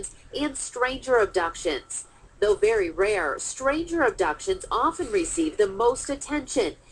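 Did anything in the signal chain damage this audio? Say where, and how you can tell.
No, nothing in the chain audibly damaged it.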